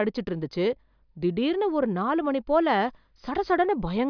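Nothing in the recording stood out as a technical problem on listening.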